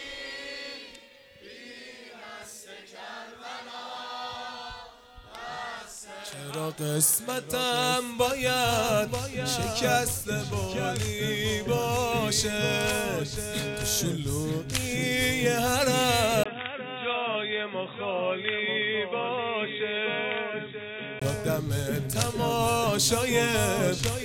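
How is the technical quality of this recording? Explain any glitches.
There's one glitch. From 16.4 to 21.2 s, after a brief 20 ms dropout, the sound goes dull and slightly quieter, with nothing above 3.8 kHz. That's likely the input switched to a poorer device, then back.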